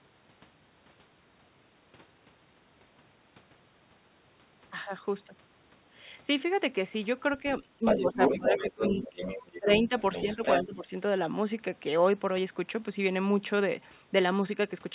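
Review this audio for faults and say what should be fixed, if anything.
Speech suppressed in double talk occurs four times: 7.79 to 9.19 s, 9.59 to 9.93 s, 10.36 to 10.45 s, and 10.62 to 10.92 s. The talker's level drops in pieces, by about 15 dB in the first stretch, about 20 dB in the second, and about 10 dB in the last two. These dips line up with a second voice on the line. The likely cause is an echo canceller that treated the overlap as echo and turned everything down. A double-talk detector that holds suppression off while the near talker is active would prevent this.

The other side's voice leaking through is heard from 7.85 to 9.59 s and again from 10.0 to 10.77 s. It comes in at roughly the same loudness as the talker. That makes it a plain second voice, not a faint trace. The most likely cause is loudspeaker playback reaching the microphone and surviving the echo canceller. Like everything in the clip, it is limited to 4 kHz by the call path. 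Better acoustic separation, or a canceller that converges faster on this echo path, would prevent it.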